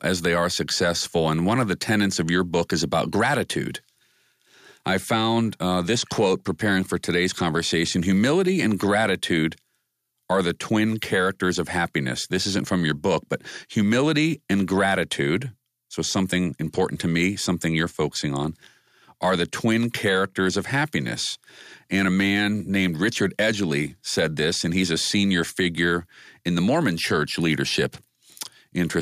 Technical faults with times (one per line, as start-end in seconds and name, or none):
none